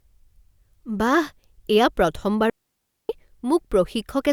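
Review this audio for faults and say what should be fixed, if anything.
A digital wireless dropout runs from 2.50 s to 3.09 s: the receiver lost too much of the radio data and muted for about 600 ms, fading out quickly into a clean hole of near silence. Unlike an analogue wireless dropout, no hiss or noise burst surrounds the gap. To prevent it, keep clear line of sight between transmitter and receiver, shorten the distance, and choose a less congested frequency.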